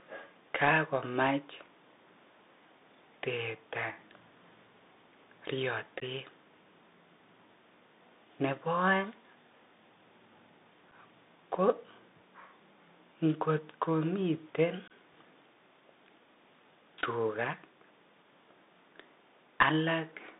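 The whole clip runs through a Bluetooth CVSD headset codec, and the damage is plainly audible. The speech sits in a narrow 250 Hz to 3.7 kHz band, which fits a 64 kbps CVSD link. The coder sends a single up-or-down bit per sample with an adapting step, so fast, loud high content outruns the step and smears. Sibilants come out scratchy, and there's a grainy hiss riding under everything.

On top of that there's unconcealed Bluetooth headset packet loss in three spots. From 6.0 to 6.02 s about 15 ms drops out, which sounds like a couple of packets. At 10.91 s a 7.5 ms hole points to a single lost packet. The longest, from 14.88 to 14.92 s, loses 22.5 ms, around three packets' worth. Nothing fills these gaps, so each one cuts off abruptly, and the speech comes back briefly quieter as the CVSD step size recovers.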